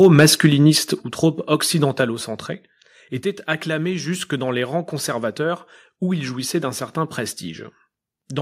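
Right at the start of this speech clip, from 0.04 to 0.47 s, the loudest peaks go flat-topped and pick up that harsh crackle you get with microphone overload. The signal is pushing about 5 dB past full scale, and only around one percent of the samples are actually clipped, so it's brief. The likely cause is the mic input gain set too hot for the converter. Then the level drops twice, and it sounds like the microphone volume being stepped down. At 1.02 s everything, background included, falls by about 6 dB in one jump, and at 2.04 s there's a second, smaller step of about 2 dB. The timing fits the call software likely reacting to that early overload by pulling the device's input gain down in stages, first hard and then a little more.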